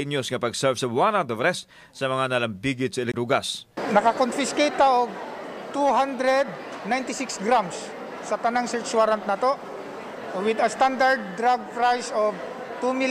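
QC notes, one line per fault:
3.12 to 3.14 s, CD skip: the laser lost its place on the disc's spiral track and landed on another turn, so the player muted output for a split second, around 20 ms, while it relocked, then carried on reading from the new position. The gap comes across as a small tick, and the sound picks up again from a different point in the material rather than continuing where it left off.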